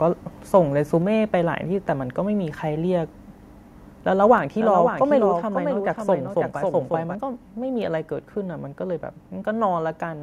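At 1.02 s the microphone volume stepped down, most likely because the call software judged the input too hot and cut the device's input volume in one move. The whole speech signal, voice and background alike, drops by about 2 dB at once, a small but sudden loss of level that stays in place afterwards.

From 4.25 s to 7.15 s there is a doubled audio track, likely the same signal captured a second time through a slower path. A full-band copy trails the original by roughly half a second, about 5 dB quieter, with no decay or room colour, so it reads as a flat second layer rather than an echo. It begins abruptly at 4.25 s and cuts off just as suddenly at 7.15 s.

Within that span the microphone volume stepped down twice more, both likely the same automatic correction: at 4.38 s by about 3 dB and at 5.4 s by about 2 dB. Each is an instant step in overall loudness, and the level stays lower afterwards.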